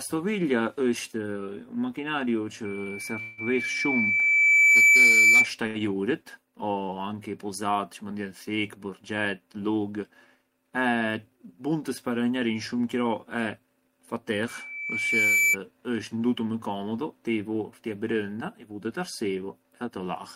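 At 2.65 s a loudspeaker feedback squeal starts: the microphone is re-amplifying its own loudspeaker output, and the loop gain exceeds one at 2.3 kHz. The tone swells over about two seconds to about 15 dB above the speech and runs until 5.51 s. On a spectrogram it shows as a single bright horizontal line at 2.3 kHz that thickens as it grows.

Inside that squeal, from 3.21 to 3.40 s, the sound stops moving forward for 162 ms and is held as a fading buzz, with no silence and nothing lost. This is likely a call audio freeze, where delayed packets left the jitter buffer empty. The waveform shows a repeated, decaying pattern, and everything after it runs 162 ms later.

At 5.67 to 5.77 s, a short stall from a late packet stretches the last sound by 82 ms with a slight buzz or dip. The spectrogram shows a brief smeared, static patch before the speech resumes intact.

From 11.00 to 11.39 s, a jitter buffer speed-up plays the speech at 111% of normal speed while the pitch stays the same. 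About 50 ms is trimmed in pitch-period pieces to cut the accumulated delay. The result sounds hurried, and the harmonics on the spectrogram stay level while the syllables are compressed.

A second loudspeaker feedback squeal runs from 14.48 to 15.57 s, again at 2.3 kHz. It builds over about a second to about 10 dB above the speech and ends just before "isht ndutu më komodu". It appears as another narrow 2.3 kHz line on the spectrogram.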